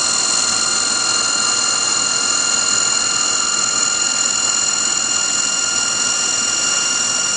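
Nothing stood out on listening to this recording.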